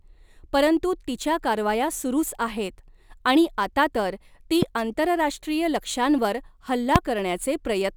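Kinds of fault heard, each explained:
Loud pop: Two single sharp pops, likely from a sudden voltage step, jump roughly 15 and 20 dB above the speech just after "आणि आता तर ती" (4.62 to 4.65 s) and after "तर ती आंतरराष्ट्रीय लक्ष्यांवर" (6.96 to 6.98 s). Unlike a dropout, the speech continues underneath.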